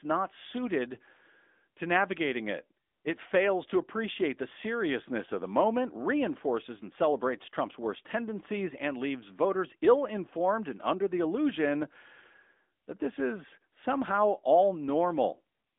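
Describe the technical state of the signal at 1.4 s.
At 1.4 s the speech has a thin telephone band of about 250 Hz to 3.6 kHz, with nothing above 3.7 kHz, and plainly audible coding artefacts. This is AMR narrowband mobile codec damage, present throughout the clip. Its 8 kHz sampling removes the upper band, and rebuilding the voice from a vocal tract model with pulse excitation, at a rate that fits a 10.2 kbps mode, causes the artefacts.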